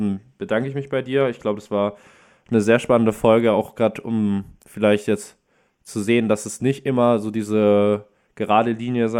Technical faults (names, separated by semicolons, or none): none